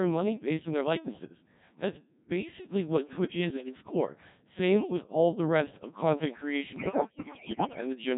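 Throughout, the speech passes through a very low-rate Codec 2 vocoder that keeps only pitch, voicing, level and a coarse spectral envelope and rebuilds the voice from sine waves. The heavy, buzzy, robotic timbre fits a setting near 1.3 kbit/s.

From 3.41 to 3.82 s, and again from 6.76 to 7.81 s, bit errors on digital voice radio corrupt the frame parameters. The first burst, at a few percent error, gives brief pitch and level jumps. The second, closer to one bit in five, dissolves into warbling bleeps and robotic gibberish.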